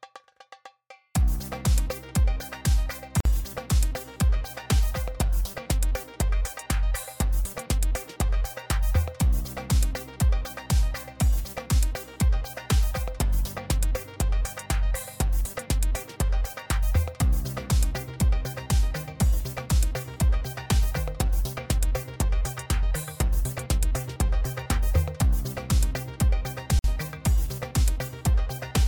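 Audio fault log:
3.20 s and 26.79 s, gap at a join of encoded pieces: separately encoded sections were joined without trimming encoder delay and end padding. The sound drops out for about 49 ms and 51 ms, with smeared edges, then resumes exactly where it stopped.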